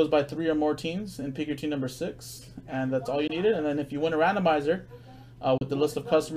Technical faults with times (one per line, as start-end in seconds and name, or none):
3.27-3.32 Bluetooth dropout
5.57-5.63 Bluetooth dropout